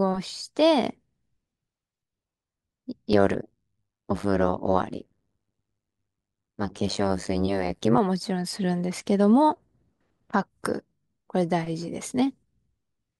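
From 3.13 to 7.99 s the speech picks up a nasty overlap-add ripple. Somewhere in the chain the audio was chopped into windowed frames and stitched back together with an overlap that doesn't add up to a steady gain, so the level dips and swells once per frame, around a hundred times a second. The swing is huge, about 60 dB, so it comes across as a harsh, buzzy, robotic flutter right through that stretch.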